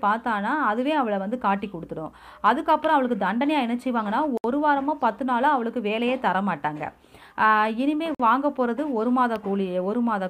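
At 4.37 s the sound drops to silence for 66 ms, then returns. At 8.15 s it happens again, with a 49 ms gap. Both are abrupt cuts to nothing, not fades. This is likely a Bluetooth stall. Interference delayed the radio packets. The headphones' buffer emptied before resent packets could refill it. Playback simply halted until audio arrived again. The result is a brief hole in the sound.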